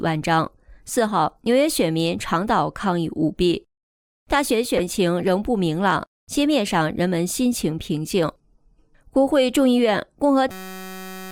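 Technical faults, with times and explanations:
4.77–4.80 s, corrupt frame decoded: one damaged frame played anyway, giving a brief glitch; the spectrogram shows a narrow vertical smear of misplaced energy.
10.51–11.32 s, system hang loop: a 5.33 ms segment, which fits a 256-sample buffer, repeats about 150 times as a 188 Hz buzz, losing roughly 0.7 s. The waveform shows identical repeating cycles, and the spectrogram shows harmonic lines.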